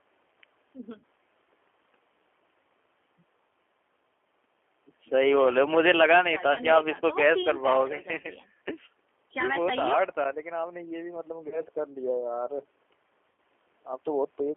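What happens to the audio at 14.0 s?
G.729 codec damage is present at 14.0 s, as it is throughout the clip. The codec rebuilds speech from a modelled vocal tract filter, a pitch predictor and a few pulses per 10 ms frame, at a rate that fits 8 kbit/s. Here the speech is confined to roughly 300 Hz to 3.4 kHz, so it sounds thin and boxy, and the coding damage is plainly audible as a rough, slightly synthetic buzz.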